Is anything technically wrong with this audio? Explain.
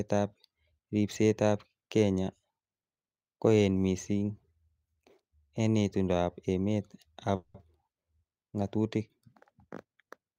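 Yes. At 7.35–7.55 s a call audio freeze, likely a jitter-buffer underrun, smears the last sound into a fading buzz, flat spectrogram bands. Speech resumes intact, 190 ms late.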